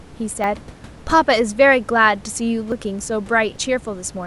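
At 0.44, 2.72 and 3.56 s the speech jumps forward, the last skip longer, about a tenth of a second. This is likely a dropped buffer (overrun): samples were overwritten before being read. A waveform shows abrupt discontinuities without gaps, and a spectrogram shows thin vertical broadband lines.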